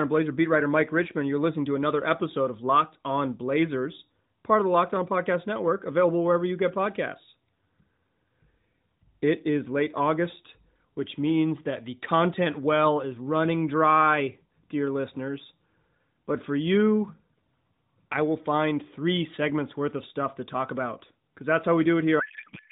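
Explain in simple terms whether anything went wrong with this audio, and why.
Something does go wrong at the very end. From 22.20 s to 22.72 s the speech turns into garbled noise and warble that barely follows it. That is a codec payload misread: the receiving end unpacks each compressed frame with its fields in the wrong places, which fits octet-aligned AMR data being read as bandwidth-efficient. The mobile-phone codec carrying the clip, with its narrow, slightly thin sound, is not what breaks; the packing mismatch is.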